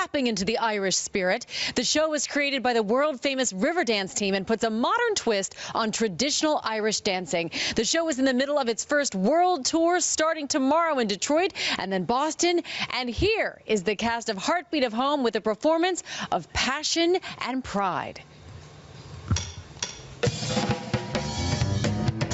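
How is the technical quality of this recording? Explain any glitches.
The recording is marred by gain pumping that runs through the whole clip. The input gain was likely set far too high, so a fast limiter clamps down on every loud sound and releases in the pauses. The level swings by around 15 dB, leaving a squashed quality. The call's microphone processing is visible in the missing lowest bass and in nothing above 8 kHz.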